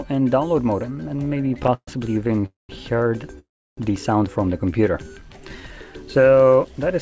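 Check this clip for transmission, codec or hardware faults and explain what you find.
Yes, there are transmission faults: two bursts of repeated stalls, two call audio freezes and one jitter buffer slow-down. The audio stops at 8 kHz, which points to a wideband call codec such as G.722.

Repeated stalls (stutter) run from 0.96 to 1.89 s, with 19 short stalls, the longest 129 ms, filling about a third of that span. A shorter burst follows from 2.27 to 2.44 s, with four stalls of 17 ms or less. Packets arrived late, the jitter buffer kept running dry, and the receiver stretched the last sound each time. Nothing is lost, but the sound drags and judders. A spectrogram shows repeated smeared, frozen slices. On the waveform, the envelope steps and flattens.

Call audio freezes occur from 2.46 to 2.71 s and from 3.39 to 3.79 s, adding 230 ms and 385 ms. The sound halts, trails off briefly as a fading buzz or hiss, then goes quiet for about 170 ms and 320 ms before resuming exactly where it stopped. 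The likely cause is packets held up long enough to empty the buffer. A spectrogram shows a short smeared tail, then a blank band. The waveform shows a decaying stretch and then a flat line.

The jitter buffer slow-down runs from 4.72 to 5.85 s. There, 133 ms is added by repeating single pitch periods and pause fragments, so playback runs at about 89% speed with unchanged pitch. Sounds are drawn out. A spectrogram shows harmonics at the same spacing but stretched sideways. The waveform shows runs of near-identical repeated cycles.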